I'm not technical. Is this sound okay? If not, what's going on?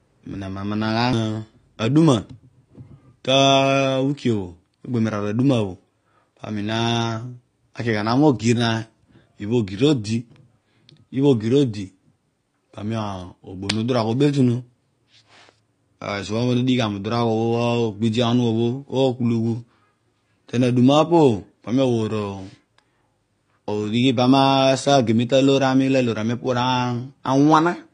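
No. The speech was likely squeezed too hard by AAC compression, a way of shrinking audio files that throws detail away. From start to finish nothing above 9.9 kHz remains, so it sounds dull and muffled, with a smeared, fizzy edge on hissing sounds.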